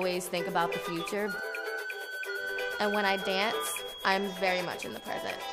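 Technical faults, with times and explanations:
1.81 to 5.53 s, feedback whistle: A thin, steady tone near 3.3 kHz enters and runs to the end. It sits roughly 15 dB below the sound and swells and fades slowly in level. A loudspeaker-to-microphone loop balanced at the edge of feedback likely sustains this single frequency.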